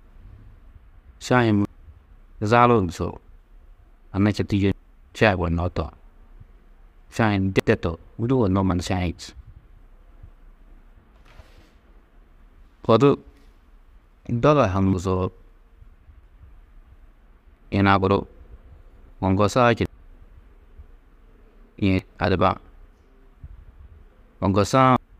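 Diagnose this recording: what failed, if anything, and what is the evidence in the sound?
Codec stage: compressed frames skipped at 1.65, 4.72, 7.60, 14.93, 19.86, 21.99 and 24.96 s. Speech jumps ahead by whole 92.9 ms frames, losing roughly 0.3 to 0.7 s each time.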